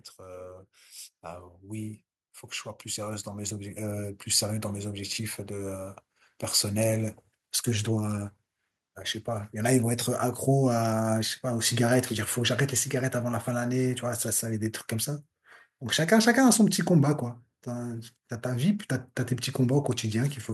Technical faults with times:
0.18-6.04 automatic gain rising
9.57-13.96 automatic gain falling

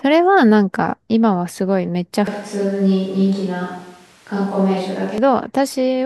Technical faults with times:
2.27-5.18 switch to a distant microphone

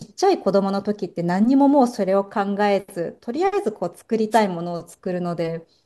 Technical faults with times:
4.31-4.40 wireless microphone noise hit

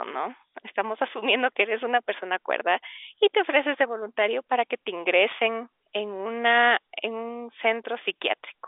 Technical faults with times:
none

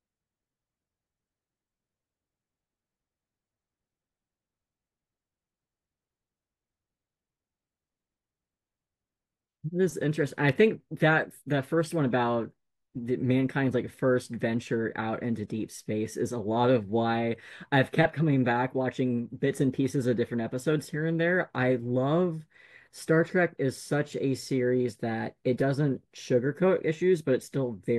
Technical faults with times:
none

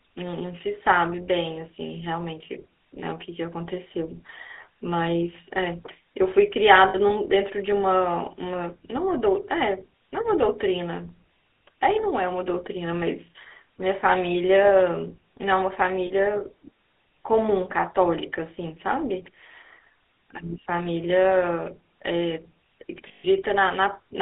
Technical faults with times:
0.00-24.22 GSM full-rate codec
6.88-6.96 lost GSM frames
16.06-16.11 lost GSM frames
23.08-23.25 lost GSM frames

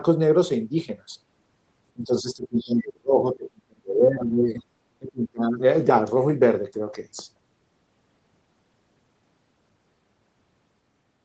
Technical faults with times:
1.95-4.63 speech suppressed in double talk
4.99-5.63 speech suppressed in double talk

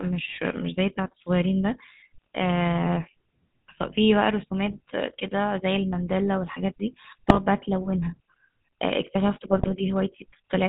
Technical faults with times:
0.00-10.68 GSM full-rate codec
2.22-2.27 GSM bit errors
4.67-4.75 GSM bit errors
7.28-7.39 GSM bit errors
9.52-9.69 GSM bit errors

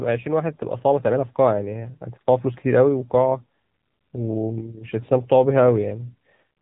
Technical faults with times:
0.00-6.61 AMR narrowband mobile codec

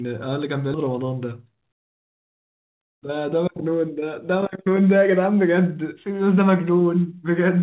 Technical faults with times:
0.74-0.90 skip ahead

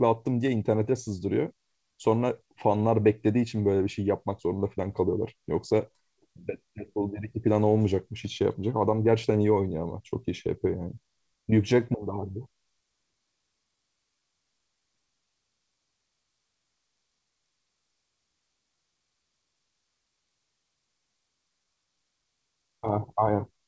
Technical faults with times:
0.00-23.68 clock drift between sender and receiver
0.76-23.58 repeated timing corrections

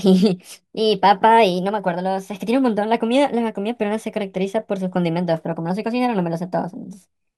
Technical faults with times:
0.00-7.38 wrong sample rate

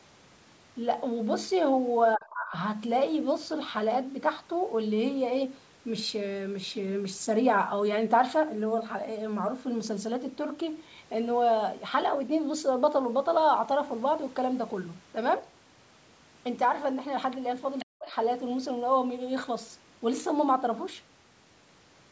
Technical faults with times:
2.17-2.54 speech suppressed in double talk
17.79-17.85 other side's voice leaking through
17.84-18.16 speech suppressed in double talk

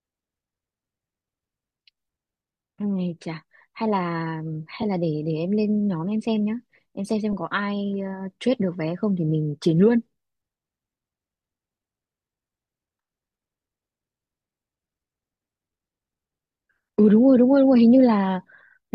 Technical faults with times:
4.82 lost LE Audio frames
7.32 lost LE Audio frames

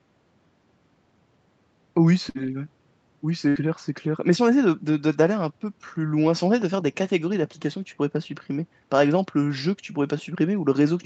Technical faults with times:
2.29-2.38 burst of packet loss
3.49-3.58 burst of packet loss

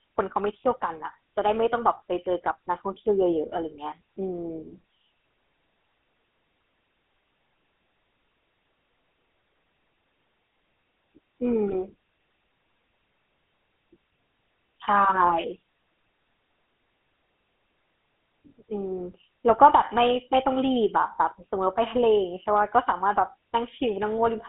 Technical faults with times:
0.00-24.48 GSM full-rate codec
11.68-11.79 GSM bit errors
15.30-15.33 GSM bit errors

